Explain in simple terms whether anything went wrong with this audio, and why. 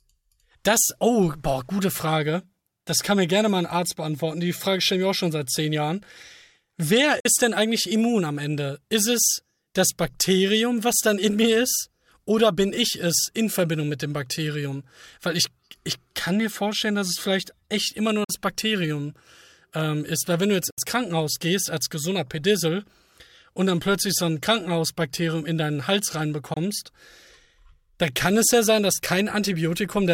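The speech cuts out four times, very briefly: at 7.20–7.26 s, 18.24–18.30 s, 20.70–20.78 s and 26.54–26.57 s. Each gap starts suddenly. The speech then picks up as if it had kept playing. This is likely a Bluetooth dropout, where sound packets reached the headphones too late.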